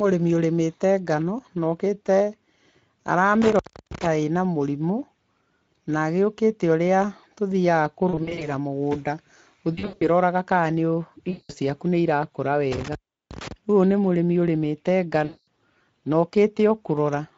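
Speech coded throughout with the Speex codec, whose damage is plainly audible: the voice is hoarse and grainy, consistent with a mid-quality setting of about 16.8 kbps, where the excitation is too coarse. On a spectrogram the harmonics look smeared and noisy, and any energy above 8 kHz is a shaped, noise-like fill rather than real detail. Intermittent contact breaks the signal twice. From 3.42 to 4.07 s, just before "ĩna mũrĩmũ", and from 12.72 to 13.52 s, right after "ciaku nĩirakũra", the line opens for about 320 ms and then about 360 ms. Each time the sound drops to faint hiss, with sharp crackles where the connection breaks and remakes. In the waveform these show as near-flat gaps edged by spiky clicks, and on a spectrogram as dark blocks bounded by thin vertical lines. VoIP packet loss concealed by the speech codec causes four more disturbances: 8.09 to 8.47 s, 9.73 to 10.04 s, 11.29 to 11.52 s (ending just before "ciaku nĩirakũra") and 15.25 to 15.47 s. 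Each loses about 180 to 220 ms of audio, which fits around 9 to 11 lost 20 ms frames. The first two are scattered losses, with the longest gaps 40 and 80 ms. The decoder fills the holes by repeating its last pitch and filter at falling gain, so the sound turns into a buzzy or coloured smear that fades. It stays weak for a moment after packets return. A spectrogram shows frozen, stretched harmonic bands that dim out, and the waveform envelope sags through each stretch.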